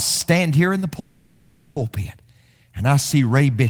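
A speech recording with two problems. Right after "here in the", from 0.99 to 1.78 s, the sound stretches into a fading buzz for about 0.77 s and then picks up exactly where it left off, with nothing lost. That's a call audio freeze, likely from packets stalling and the jitter buffer running dry. Then after "and I see", from 3.59 s to the end, a loudspeaker feedback squeal breaks in: a single 2.7 kHz tone swells up to a few dB above the speech as the mic picks up its own loudspeaker.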